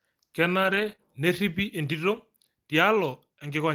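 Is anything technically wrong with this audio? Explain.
Yes. From 0.63 to 0.93 s there is a lost packet rebuilt from error correction: eight separate packets went missing, and the decoder played the low-bitrate copies carried in the following packets. About 160 ms of speech comes through rougher and noisier, without any gap.

At 0.95 to 1.00 s comes a short concealed packet loss: about 20 ms never arrived in time, so the receiver extended the preceding sound over roughly 25 ms before blending back into the real signal. It is heard as a brief smear or wobble.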